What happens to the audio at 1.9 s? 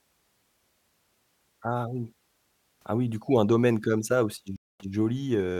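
Nothing goes wrong at 1.9 s: the speech there plays through cleanly, with no dropout, click, distortion or other fault at that moment.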